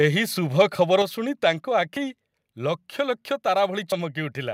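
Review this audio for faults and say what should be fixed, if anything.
Microphone overload appears from 0.59 to 0.62 s, where peaks push about 2 dB past full scale and a small share of samples are flattened, giving a brief harsh crackle on the loudest syllable. The likely cause is an input volume set too high, so the converter's ceiling shaves off the tops of the waveform. On a waveform those tops look squared off; a spectrogram shows a short burst of broadband energy smeared upward. Setting the input volume with a few decibels of headroom below full scale would prevent it.

Microphone volume stepped down at 1.02 s: after the distorted peak, the sound and its background fall together by about 5 dB in a single step, with no fade. This is likely the call software reacting to the clipping by lowering the device's input volume. The waveform envelope shows a sudden drop, and the spectrogram turns uniformly dimmer at that instant. 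Disabling automatic microphone volume control, or fixing the overload first, would prevent it.

Audio missing between chunks occurs at 1.97 s and 3.92 s, roughly 2 s apart, each a skip of around 40 ms where the sound jumps forward abruptly. The two-second spacing points to a recorder or processor working in 2-second blocks and likely dropping material at each handover, then butting the ends together without silence. The waveform shows a sharp discontinuity, and the spectrogram shows a thin vertical seam where the patterns fail to line up. Overlapping or properly buffered chunk handling would prevent it.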